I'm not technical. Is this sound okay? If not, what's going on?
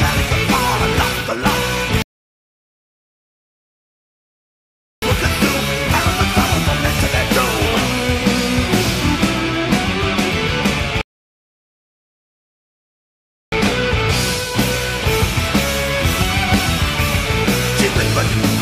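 No. There are two rebuffering stalls, at 2.02 to 5.02 seconds and 11.01 to 13.52 seconds. Each time, the player used up the audio it had downloaded and had to wait for more, so the sound drops to silence and then carries on from exactly where it stopped. Nothing is missing, but the pauses add about 3 seconds and 2.5 seconds of dead air.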